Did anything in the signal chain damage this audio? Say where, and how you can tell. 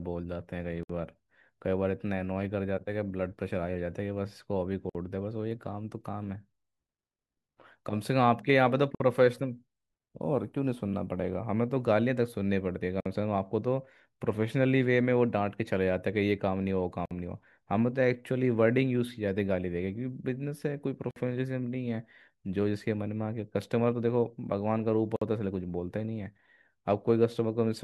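Yes. The damage happened at the codec stage: the speech was encoded in separate pieces and joined without trimming, leaving a gap at each join of encoded pieces. Each encoder run's start-up delay and padded last frame stay in as silence. The silences open at 0.83, 4.90, 8.95, 13.00, 17.06, 21.11 and 25.16 s, every 4 s. The first lasts 62.5 ms and the rest about 53 ms. Each has smeared edges before the speech resumes where it stopped.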